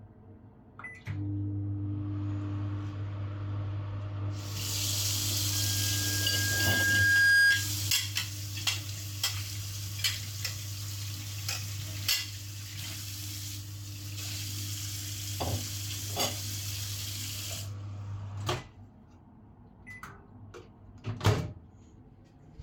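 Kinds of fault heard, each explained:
Loudspeaker feedback squeal: a microphone is re-amplifying its own loudspeaker output, and at 1.6 kHz the loop gain exceeds unity. From 5.52 to 7.72 s that single tone swells over roughly two seconds into a squeal about 15 dB above the surrounding sound.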